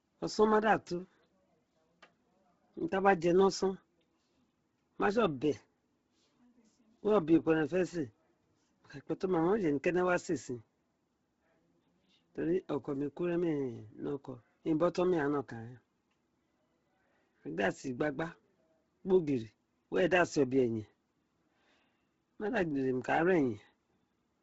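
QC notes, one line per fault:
throughout: Heavy Bluetooth LC3 compression, likely at about 16 kbps: speech turns breathy and grainy, with nothing above 7.7 kHz and a noise-filled top band that plain filtering lacks.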